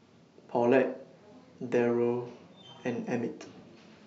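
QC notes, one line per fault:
No technical faults are detectable in this speech signal, which holds steady level and continuity with no dropouts, clipping, noise bursts or timing disturbances.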